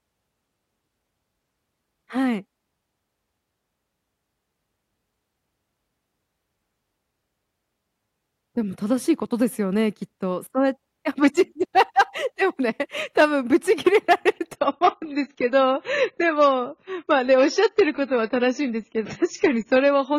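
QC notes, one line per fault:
14.53 to 20.19 s: adaptive stream at a lower bitrate. The speech suddenly turns dull and swirly with nothing above 7 kHz, consistent with a switch to a much lower-bitrate version.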